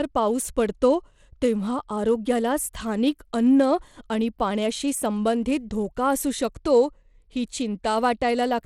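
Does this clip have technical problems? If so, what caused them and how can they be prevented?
Yes. Throughout the speech there is plainly audible codec damage, most likely from Bluetooth SBC compression. Nothing is heard above 17.3 kHz. The top end thins and flickers, and a gritty grain sits on the sound. SBC splits audio into a few wide bands with no real hearing model. At a small bit budget, which fits roughly 96 kbps, the upper bands starve and the rest are coarsely quantised. To prevent it, record over a wired connection or use a higher-quality Bluetooth codec and bitrate.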